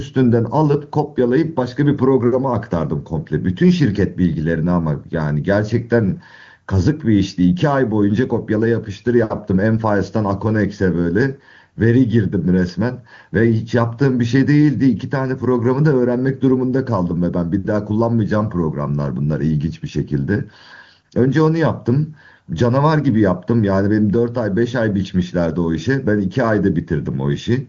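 Nothing stood out on listening to this speech clip, which comes through an AMR wideband (HD Voice) path.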